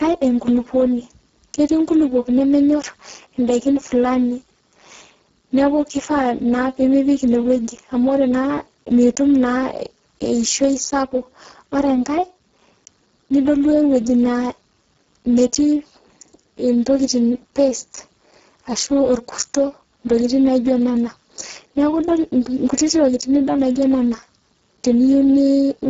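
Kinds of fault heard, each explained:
Speex codec: heavy low-bitrate CELP coding turns the speech hoarse, buzzy and near-robotic, not just dull; nothing above 7.7 kHz, at roughly 5.8 kbps.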